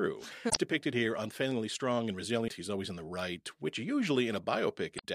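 Speech with damaged data in a compressed stream: brief disruptions at 0.49–0.57 s (before "depicted here unfailingly strong"), 2.44–2.50 s (after "here unfailingly strong and") and 4.95–5.05 s, where the decoder lost frame sync. Unlike plain dropouts, these come from the decoder misreading frames and searching for the next frame header.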